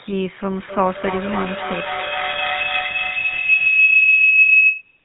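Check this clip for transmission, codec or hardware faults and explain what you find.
One codec fault runs through the whole speech clip. The GSM full-rate codec is audible from start to finish. It models the vocal tract and drives it with a sparse, regularly spaced pulse excitation. Very little detail survives, which fits a rate near 13 kbps. The voice sounds buzzy and gravelly. Nothing is heard above about 3.9 kHz, so it sounds dull and narrow.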